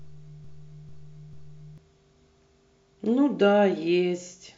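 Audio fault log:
0.00–1.78 s, broken-record loop: a stall likely kept resending the last buffered fragment, so a 0.44 s piece repeats three times from the start, replacing the intended speech.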